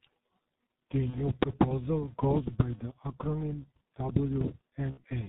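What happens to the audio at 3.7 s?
At 3.7 s the speech carries a steady 200 Hz buzz that rises and falls with its loudness, as it does through the whole clip. This is a filter restarted on every block: the filter discards its memory at each block boundary and starts again from silence, so every block opens with a small transient. Those transients repeat 200 times a second, which fits blocks of about 5 ms, and fuse into a buzz that tracks the signal level.

The same moment also sounds heavily muffled and hoarse, with smeared consonants, again across the entire clip. This is G.723.1 codec damage. The codec works in 30 ms frames and removes everything above 4 kHz, which dulls the speech. At a very low bitrate, which fits its 6.3 kbit/s mode, it updates its model of the voice only slowly, so fast consonant transitions blur together and the voice takes on a rough, hoarse texture.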